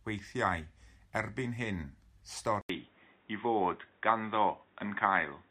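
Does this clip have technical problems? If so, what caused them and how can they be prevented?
Yes. At 2.61 s there's an 80 ms gap, then the speech returns dull and boxy with nothing above 3.8 kHz, a small level shift and a faint new noise floor. That's likely the input switched to a poorer device. Pin the input device before recording.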